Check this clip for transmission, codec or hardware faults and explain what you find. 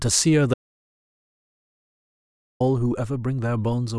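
One fault is present: an audio dropout to silence. It runs from 0.54 s to 2.60 s, so about 2.06 s of the speech is missing. The speech stops abruptly mid-flow and returns just as suddenly. The gap is dead silence, with no room tone underneath. The likely cause is a lost input, such as a disconnected device, a failed link or a stray mute. Meanwhile the recorder kept writing silence.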